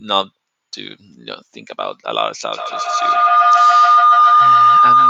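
Feedback howl starts at 2.53 s and lasts to the end. A microphone-to-loudspeaker loop gains each trip, building a tone near 1 kHz, pulsing about every 150 ms, about 11 dB above the speech.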